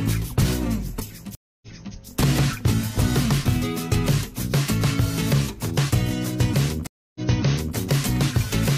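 At 1.35 s and again at 6.87 s the connection drops, and the player has to reconnect and start a new decoder partway through the stream, producing a stream reconnect each time. The first cuts the audio for 270 ms before resuming about 0.33 s earlier, so a short stretch repeats, with the episode ending by 1.96 s. The second is a 283 ms gap that ends by 7.76 s and jumps back about 0.6 s. Each restart comes in muted or fading in.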